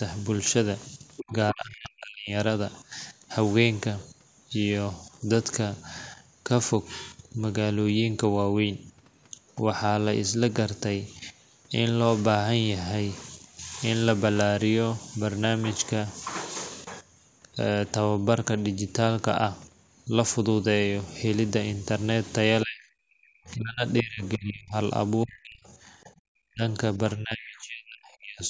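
At 1.16 to 1.33 s a scrap of a second voice sits about 15 dB under the speech: the other side's voice leaking through, likely loudspeaker echo the echo canceller left in the microphone signal. Overlapping it, from 1.19 to 2.32 s, the talker's speech dips and breaks up for roughly a second, at worst by around 40 dB. This is speech suppressed in double talk, likely the canceller turning everything down when both sides spoke at once. The same ducking returns from 22.64 to 26.62 s, cutting into about 2 s of speech, likely from the same cause. Within it, from 25.71 to 26.19 s, a very faint trace of the far voice, some 40 dB down, leaks through, likely residual echo again. From 27.16 to 28.42 s the speech is suppressed once more for about 1.5 s, likely the same double-talk behaviour. Between 27.41 and 27.62 s the other side's voice leaks in about 25 dB below the talker, likely uncancelled echo.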